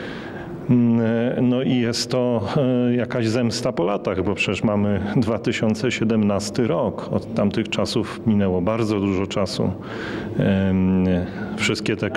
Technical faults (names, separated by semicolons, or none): none